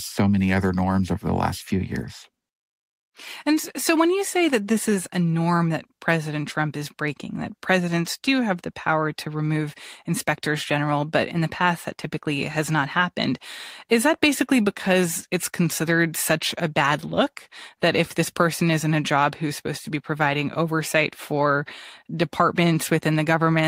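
No technical faults can be heard anywhere in the recording.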